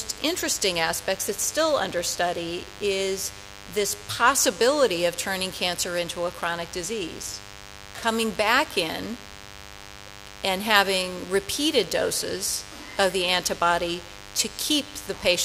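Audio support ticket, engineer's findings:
DECT cordless phone buzz, throughout. Audio input stage rectifying RF bursts from a nearby DECT handset or base, one every 10 ms, so a 100 Hz pulse train rides under the audio. Heard as steady, thin, harmonic-rich buzz, about 20 dB below signal, constant start to finish.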